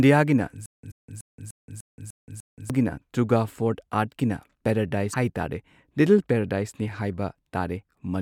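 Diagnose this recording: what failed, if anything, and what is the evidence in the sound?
A 123 ms burst of speech repeats seven times from 0.66 to 2.70 s, separated by 175 ms of dead silence. This stutter with silent gaps likely comes from a stalled playback buffer.

Brief disruptions at 0.88–0.92 s and 5.10–5.15 s, the second just before "ꯍꯥꯏ ꯇꯥꯔꯦ", show damaged data in a compressed stream: the codec loses sync and searches for the next frame header.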